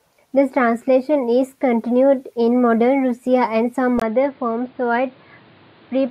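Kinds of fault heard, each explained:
Input switched to a poorer device: at 4.0 s, after "and some", a 20 ms gap, then duller, quieter speech cut off above 4.9 kHz with new background noise, likely a microphone change.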